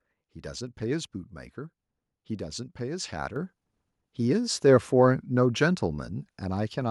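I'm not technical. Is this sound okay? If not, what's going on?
No. At about 3.36 s the microphone volume stepped up: the calling software judged the microphone too quiet and turned its input up in one instant jump. Unlike someone simply leaning closer to the microphone, the background noise gets louder at the same moment as the speech.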